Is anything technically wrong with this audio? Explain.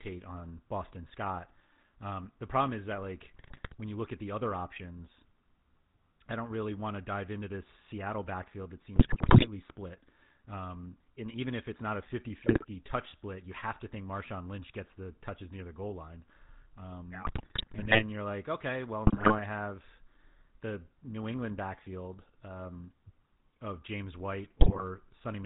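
Yes. GSM full-rate codec coding runs through the whole speech clip, which fits the 13 kbps full-rate codec. The codec reduces speech to a vocal-tract filter driven by a sparse, regularly spaced pulse excitation, and nothing above 4 kHz survives. The result is a plainly audible buzzy, gravelly roughness, with dull, band-limited sibilants.

GSM bit errors strike at six points: 3.34–3.75 s (between "problem is that like" and "when you look at"), 8.96–9.47 s, 12.42–12.65 s, 17.24–18.03 s (just before "you're like okay well"), 19.06–19.39 s (between "you're like okay well" and "have the"), and 24.6–24.82 s. Corrupted filter, pitch and gain values reach the decoder, so short stretches of speech warp spectrally or jump in level. They come out as squawks, pops and gargling bursts.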